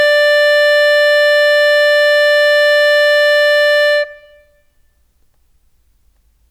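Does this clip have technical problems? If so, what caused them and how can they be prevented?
No, nothing in this bit of music points to a technical problem, so there's nothing here that needs preventing.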